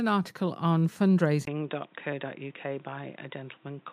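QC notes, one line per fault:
1.45–3.93 s, input switched to a poorer device: after "article on", a 20 ms gap, then the speech turns dull and boxy with nothing above 3.8 kHz, drops about 5 dB and gains a faint new noise floor, likely from recording moving to a narrowband headset or microphone.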